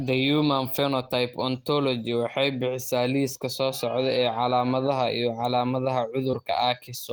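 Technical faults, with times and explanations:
5.39 s and 6.33–6.35 s, lost packet rebuilt from error correction: each lost 20 ms packet was replayed from the low-bitrate copy carried in the next, leaving no gap but a rougher, noisier patch.
6.31–6.35 s, short concealed packet loss: 20 ms arrived too late, and the decoder extended the preceding sound for about 15 ms before blending back, heard as a brief smear.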